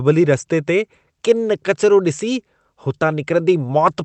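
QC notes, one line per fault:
No fault to note, one line per fault giving none here, with the speech carried over the WebRTC call path working as expected.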